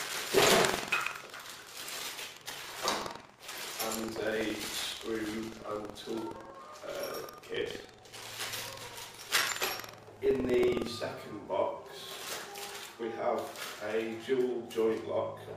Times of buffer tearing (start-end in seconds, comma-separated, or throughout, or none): 0.00-10.90